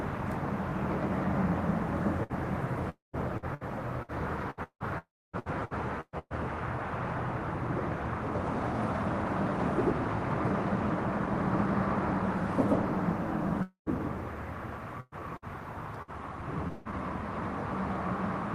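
At 2.23 s there is a burst of packet loss lasting to 2.32 s. Packets went missing, and the receiver patched a 60 ms hole by stretching the last sound and fading it. A brief held buzz or hiss stands in for the real audio. Then the sound jumps ahead, with 60 ms of the original gone.

From 2.89 to 3.16 s comes what is likely a long network dropout. No audio arrived for a stretch. The last sound is continued and fades out, and about 160 ms of near silence follows. When the audio returns, about 240 ms is missing. The same thing happens from 4.98 to 5.36 s, with 360 ms lost and 280 ms of it silent. It happens again from 13.62 to 13.89 s, with 240 ms lost and 120 ms silent.

Repeated packet loss (robotic sound) runs from 3.37 to 6.33 s. The receiver filled nine separate gaps, each with a continued, fading piece of the last sound. About 26 percent of the stretch is patched this way, 0.77 s in all. 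The longest gap is 170 ms. The result is choppy, with pieces missing. A second run spans 15.00 to 16.95 s. It has five gaps totalling 0.42 s, which is 21 percent of that span. Its longest gap is 176 ms. Throughout, the audio shows the band limit of an Opus call path, which tops out around 12 kHz.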